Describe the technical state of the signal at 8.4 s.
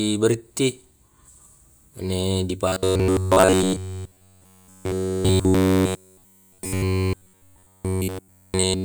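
Robotic sound from repeated short buffers spans 2.68 to 8.85 s, likely starved input looped as roughly 11 ms slices, forcing a rigid, metallic 93.8 Hz buzz throughout.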